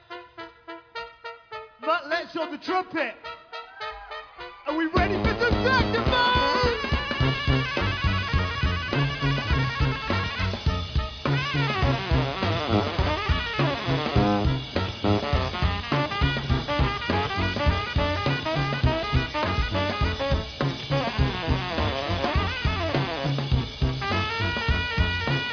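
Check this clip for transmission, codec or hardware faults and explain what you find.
No transmission, codec or hardware faults can be heard anywhere in the recording, and the signal arrives intact without any audible disruption.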